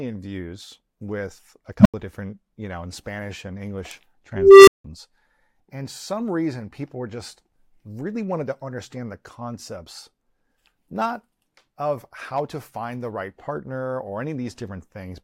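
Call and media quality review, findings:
Unstable filter, 1.79 to 1.94 s: low tone around 200 Hz swells over 58 ms to clipping, then 85 ms of silence. Recursive filter stage with bad coefficients, feedback grows until overflow and reset.

Unstable filter, 4.35 to 4.84 s: tone near 400 Hz builds more slowly, over 320 ms, clips, then 170 ms of dropout. Same runaway feedback in the recursive filter; the output blows up, the numbers overflow, and the signal mutes until the filter resets.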